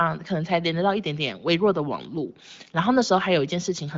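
No technical faults are audible anywhere here.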